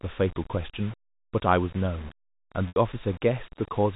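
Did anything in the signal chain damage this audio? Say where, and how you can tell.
Yes. The first damage is at the sample-format conversion stage, where the audio was likely reduced to very few bits and rounded without dither, which fits roughly 6 bits. It runs through the whole clip as a coarse grain that rises and falls with the speech, around 20 dB below the signal. The error tracks the waveform rather than sitting as a steady hiss, so quiet stretches turn gritty instead of softly noisy.

The second is a network fault: packet loss with pitch repetition from 2.68 to 2.76 s, about 80 ms missing, which points to several consecutive packets dropped. The receiver filled the hole by repeating the last pitch cycle and letting it decay, so that moment fades into silence before the speech returns with a short cross-fade. The telephone codec around it passes its narrow band cleanly, with nothing above 4 kHz, so the damage comes from the network, not the coding.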